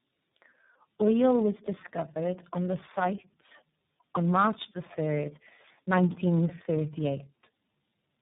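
Tandem speech coding runs throughout: the speech was decoded and re-encoded at each link, passing through three speech coders in turn, which fits a chain ending in iLBC. Each coder compounds the last one's damage, leaving rough, muffled, warbly speech with nothing above 3.8 kHz.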